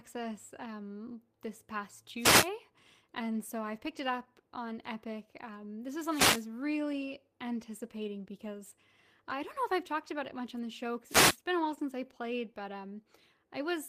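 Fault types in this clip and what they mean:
Wireless microphone noise hit: the analogue FM radio link fades, letting receiver noise through as short static swishes, around 2.2, 6.1 and 11.1 seconds.
Short concealed packet loss: 20 ms of audio never arrived and the decoder filled it by extending the preceding sound, giving brief smears near 11.75 and 12.54 seconds.
Lost packet rebuilt from error correction: a lost 20 ms packet was replayed from a low-bitrate copy carried in the next packet, sounding briefly rougher and noisier at 11.77 seconds.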